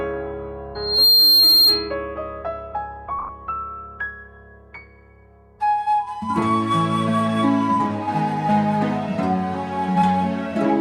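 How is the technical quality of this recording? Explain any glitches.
The recording's technical quality is marred by two distinct faults: a brief feedback squeal near the start and a short patch of lost wireless audio a little later.

From 0.75 to 1.95 s there is loudspeaker feedback squeal. A microphone is hearing the loudspeaker it drives, and at 4.2 kHz the loop gain tops one, so that frequency feeds on itself. It swells over roughly a third of a second into a piercing tone sitting around 10 dB above the rest of the sound. The gradual build from nothing is what marks it as feedback rather than an interfering whistle or test tone, which would appear at full level.

Between 3.19 and 3.29 s there are lost LE Audio frames. About 50 ms of audio went missing across a 100 ms stretch, in short runs, the longest around 20 ms, which points to a handful of dropped frames. The LC3 decoder patched each gap by replaying the last spectrum with scrambled phase, so the sound turns briefly into a grainy, noisy smear. 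Unlike a plain dropout, the gaps are filled with that hiss-like texture instead of silence or clicks.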